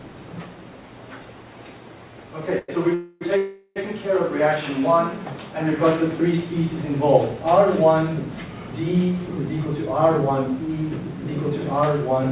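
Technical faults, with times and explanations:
2.59 to 2.70 s, short stall from a late packet: the sound is held about 97 ms too long, with a faint buzzy sustain before it carries on from exactly where it paused, so nothing is lost. The jitter buffer ran dry for one late packet and the receiver stretched the last sound to cover it. A freeze is longer.
2.94 to 3.23 s and 3.37 to 3.78 s, call audio freeze: the sound stops moving forward for 264 ms and then 390 ms. Each time the last sound continues as a buzz or hiss that fades, without dropping to silence, before the audio resumes where it left off, with no missing content. The likely cause is packets held up in transit, which emptied the jitter buffer and forced the receiver to invent fill. These pauses are longer and more decayed than the brief stall just before them. The narrow band that cuts off at 4 kHz fits a G.711-type call codec.
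9.60 to 12.27 s, jitter buffer speed-up: the audio runs at about 107% speed with its pitch unchanged, so the closing stretch sounds hurried. Roughly a fifth of a second was removed in small cuts of a pitch period or so at a time. Earlier delays had left too much audio queued, and the receiver trimmed it to reduce latency. Resampling would also shift the pitch, and this doesn't.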